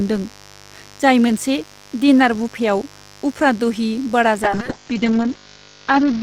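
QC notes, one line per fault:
Throughout, mains buzz: a steady, raspy buzz sits under the speech, roughly 30 dB down. Sharp switching spikes on a 50 Hz supply get in twice per cycle, so harmonics stack well up into the kilohertz range instead of giving a clean hum.
4.45 to 6.23 s, call bitrate drop: for the last 1.78 s the speech turns rough and watery and loses its top end, with a cutoff around 8 kHz instead of reaching 20 kHz. That fits the encoder falling from about 32 to 7 kbps after a bandwidth estimate dropped.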